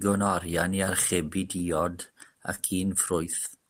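The sender's audio clock runs slower than the receiver's, by roughly 2 percent, so this clock drift between sender and receiver persists through the whole speech clip. The receiver consumes audio faster than it arrives, and its jitter buffer keeps draining. To hold it up, the receiver has to keep lengthening the sound it plays. The result is a faint unevenness in timing rather than any obvious break.

From 0.10 s to 2.34 s the drift shows up as repeated timing corrections. The receiver plays this stretch at 99 percent speed, repeating short slivers of sound and adding about 40 ms in total across those two seconds. The edits all stretch the sound and are spaced unevenly. Each is too small to stand out on its own, so together they come across as slight hiccups or a slightly slack, unsteady pace.

Between 2.55 s and 2.60 s a short stall from a late packet occurs. The next packet is late, so the buffer runs empty when it is due, and the receiver holds the last sound for 30 ms until the data arrives. 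It then resumes from the same point. Nothing is lost, but playback now sits 30 ms later, and the sound at that moment is drawn out, with a slight buzz or dip.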